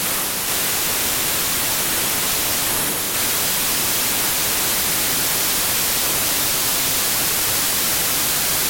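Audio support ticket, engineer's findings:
Wrong sample width throughout: 32-bit integer samples read as packed 24-bit, misaligning bytes. Loud noise over buried speech, slowed to 0.75x with lowered pitch.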